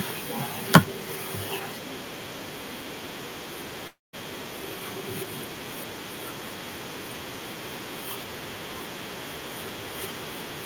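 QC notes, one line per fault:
3.87–4.15 s, long network dropout: the speech breaks off and the last sound is stretched into a fading buzz. About 255 ms is filled in this way, roughly 190 ms of it near-silence, before speech resumes, with about 260 ms of the original audio absent. This likely comes from packets failing to arrive. The receiver's concealment repeats and decays the final fragment until it has nothing left to extend. When playback rejoins the live stream, the missing section is skipped.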